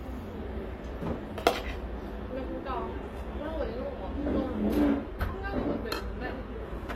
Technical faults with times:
2.77-6.95 adaptive stream at a lower bitrate

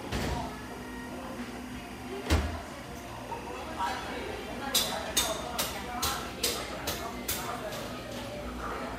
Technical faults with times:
0.00-6.29 timecode bleed

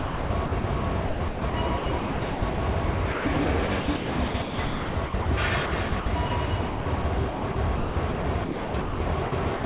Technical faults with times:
0.00-2.58 sound chopped by the voice detector
2.86-5.26 sound chopped by the voice detector
5.66-7.04 sound chopped by the voice detector
7.30-9.64 sound chopped by the voice detector

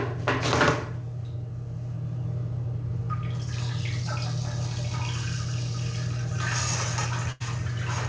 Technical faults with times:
7.32-7.42 burst of packet loss

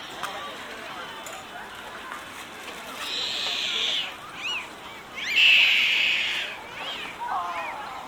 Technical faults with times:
none

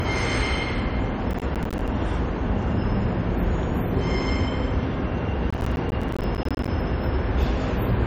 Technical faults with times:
0.00-8.06 MP3 compression
1.31-1.88 processor overload crackle
5.50-6.68 processor overload crackle

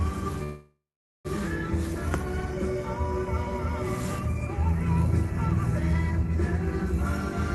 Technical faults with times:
0.43-1.27 call audio freeze
6.87-7.55 pre-emphasis left on

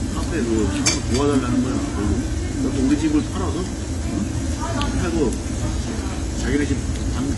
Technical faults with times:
0.00-7.37 AAC compression

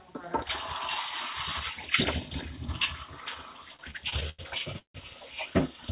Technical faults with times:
3.76-4.40 repeated stalls (stutter)
4.78-4.96 call audio freeze

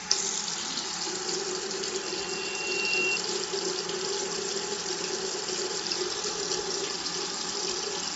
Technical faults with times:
0.00-8.16 Bluetooth LC3 compression
2.02-3.20 loudspeaker feedback squeal

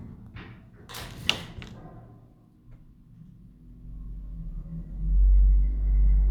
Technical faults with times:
none

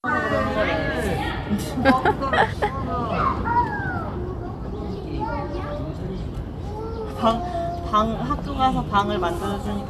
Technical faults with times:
none

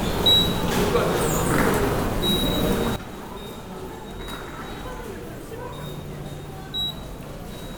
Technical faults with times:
2.96-7.78 sudden gain jump

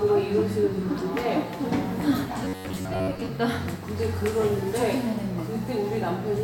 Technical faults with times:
2.45-3.30 robotic sound from repeated short buffers

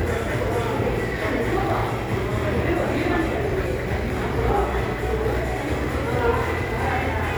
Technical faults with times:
none

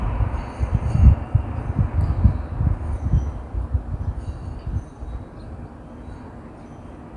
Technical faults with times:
none

